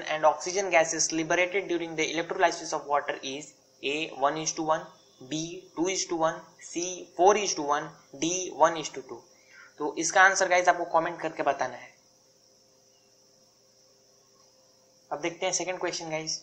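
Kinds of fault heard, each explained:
No technical faults detected anywhere in the audio.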